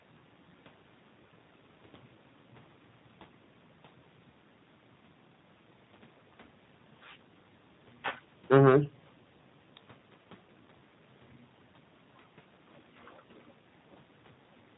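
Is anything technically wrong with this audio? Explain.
Yes. Throughout the speech, the sound is slightly rough and synthetic, with nothing above 4 kHz. That points to G.729 coding at a rate that fits 8 kbit/s: each 10 ms frame is rebuilt from a vocal tract filter, a pitch predictor and a few pulses, so the plainly audible damage comes from the model itself.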